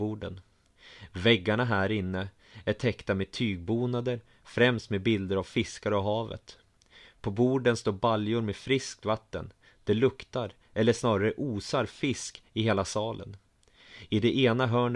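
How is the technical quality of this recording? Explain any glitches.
No glitches can be heard in this speech recording. Nothing in it breaks up, drops out or jumps, so there is nothing to explain.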